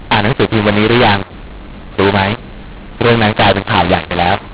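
Throughout, mu-law and A-law are mixed up: mu-law read as A-law scrambles levels, making speech harsh; pauses show a raised waveform floor and spectrogram haze.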